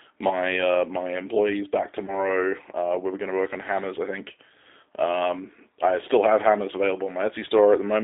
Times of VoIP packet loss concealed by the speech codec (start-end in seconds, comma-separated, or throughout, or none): 2.06-2.13